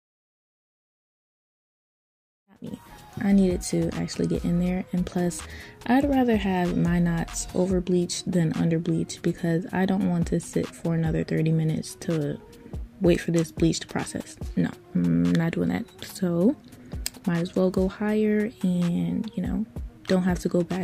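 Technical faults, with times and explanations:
No technical faults can be heard in this audio. It opens with a smooth fade-in that begins around 2.5 s and reaches full level by 2.99 s, with no click or hard edge.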